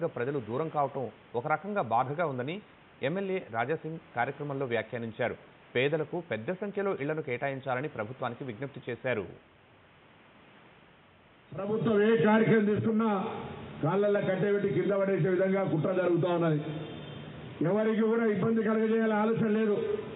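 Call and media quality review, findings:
No faults found in the audio. Nothing in the sound points to a failing component in the capture, transport or playback path.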